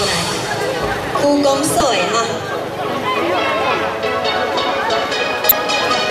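At 1.78–1.81 s and again at 5.49–5.52 s there's damaged data in the compressed stream: the decoder trips on bad frames, losing sync, leaving brief glitches.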